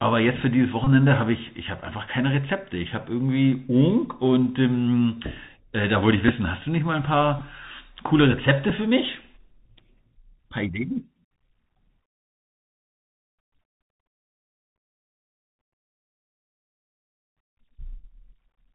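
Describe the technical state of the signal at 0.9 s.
Just before 0.9 s, from 0.84 to 0.88 s, a Bluetooth headset packet repeat fills 22.5 ms, consistent with about six lost packets, by replaying the last packet every 3.75 ms, giving a brief buzz near 267 Hz. Underneath, the Bluetooth CVSD headset codec, consistent with its 64 kbit/s one-bit-per-sample coding, plainly cuts everything above 4 kHz and leaves scratchy sibilants and granular hiss.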